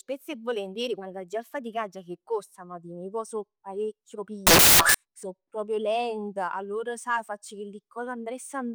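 A speech clip with one stretch of samples built from the wrong bytes, from 4.47 to 4.94 s. For just under half a second, the audio turns into loud, harsh broadband noise. The reader has assembled each sample from mismatched bytes, through an offset, swapped byte order or wrong alignment. The rapidly changing low bits end up as the large part of every value.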